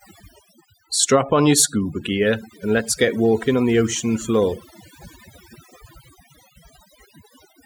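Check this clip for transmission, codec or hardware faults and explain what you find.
The speech carries one fault, overdone noise removal, present for the whole clip. A noise reducer set too strong is pulling individual frequency bands down or out whenever they sit close to its noise estimate, and the quieter parts of the speech fall under that threshold along with the noise. The background drops and breaks up into twinkling specks. On a spectrogram this shows as isolated flickering dots in the gaps and ragged, hollowed-out harmonics in the speech.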